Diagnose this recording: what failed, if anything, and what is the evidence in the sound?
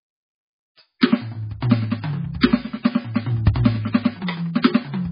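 The failure is at the codec stage, most likely heavy MP3 compression. Nothing reaches above 5 kHz for the whole music clip, and the sound has a watery, swirling texture. That points to a very low bitrate, around 16 kbps, with the encoder cutting treble and dropping weak spectral lines.

Pre-echo shows at 0.99 to 1.03 s: a brief hiss of about 32 ms arrives before an attack, which then sounds softened. This also comes from the codec. Quantisation noise spread across the transform block leaks into the quiet moment ahead of the transient.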